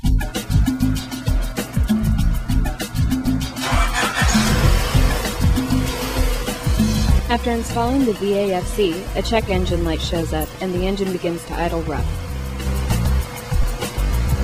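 Near the end, at 13.62 s, the audio briefly turns into a noisy smear. This is lost LE Audio frames. About 15 ms went missing, which fits two dropped frames. The LC3 decoder filled the gap by repeating the last spectrum with random signs.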